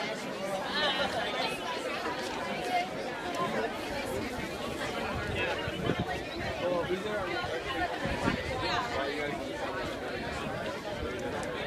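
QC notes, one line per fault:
No faults heard anywhere in the clip.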